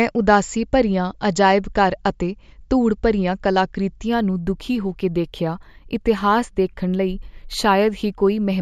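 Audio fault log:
4.08–8.62 s: imaging from linear upsampling. Straight-line interpolation, which fits a 16 kHz source raised to 44.1 kHz, dulls the top and leaves a mirrored copy at 8 to 16 kHz, about 35 dB down. It sounds as a metallic shimmer on sibilants, and a spectrogram shows a reflected band above 8 kHz.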